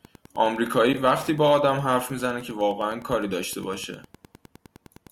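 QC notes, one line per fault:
throughout, Wi-Fi interference: a nearby Wi-Fi radio's transmissions are being picked up and rectified by the audio circuit, so its beacon, repeating every 102.4 ms, comes through as a steady ticking just under ten times a second, sitting roughly 25 dB below the speech.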